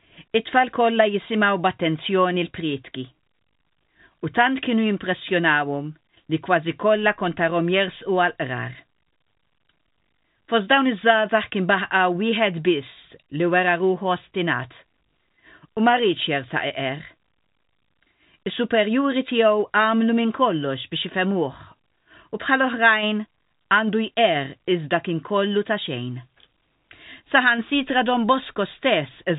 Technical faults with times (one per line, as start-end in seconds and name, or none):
none